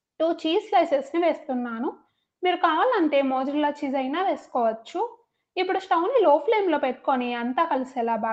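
Nothing stood out on listening; the sound comes across as ordinary call audio, limited to about 8 kHz by the call's normal processing.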